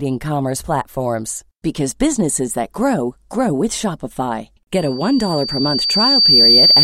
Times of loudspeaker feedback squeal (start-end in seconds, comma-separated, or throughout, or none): 4.74-6.84